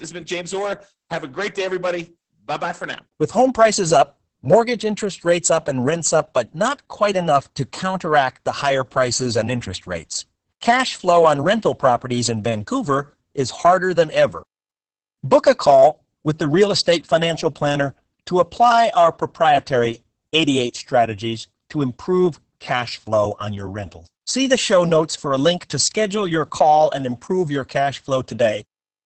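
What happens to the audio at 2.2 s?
Throughout, Opus voice compression codes the speech coarsely with SILK, capping the band near 8 kHz, so at 2.2 s it sounds muffled, hoarse and slightly robotic.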